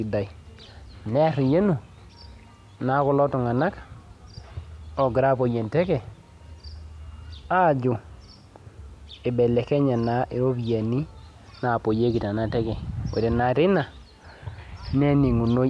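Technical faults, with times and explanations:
No technical faults can be heard in this speech recording.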